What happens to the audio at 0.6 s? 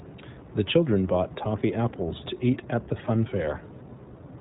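At 0.6 s the speech carries iLBC codec damage, present through the whole clip: nothing above 4 kHz, and a plainly rough, synthetic grain from excitation coded independently per frame, which fits the 15.2 kbps, 20 ms mode. Unlike a plain low-pass filter, it also roughens what remains below 4 kHz.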